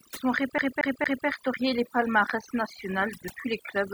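From the first moment the gaps between phrases sink to near silence flecked with twinkling specks. This is overdone noise removal. A noise reduction stage set far too aggressively pulls individual frequency bands down or shuts them off whenever they come close to its picture of the background noise. The quieter parts of the voice sit near that level, so they get cut away too, leaving the chirpy texture heard across the whole recording.

Between 0.58 s and 1.27 s the audio locks into a fast, even stutter. The same stretch of about 230 ms plays again and again, three times in all, with a brief mute at each jump back. This is the sound of a CD stuck on one turn. A scratch at one spot on the disc knocks the laser back a track every revolution, so each pass returns to the same short piece of audio before playback finally moves on.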